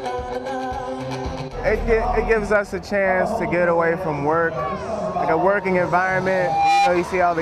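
From 6.21 to 6.97 s, loudspeaker feedback squeal: a microphone re-amplifies its own speaker, and at 801 Hz the loop gain tops one. The tone swells over about half a second to about 5 dB above the sound, which sets it apart from a steady hum.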